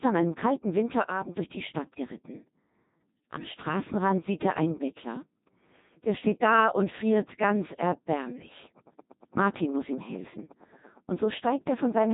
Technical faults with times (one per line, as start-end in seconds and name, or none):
0.00-12.13 Codec 2 vocoder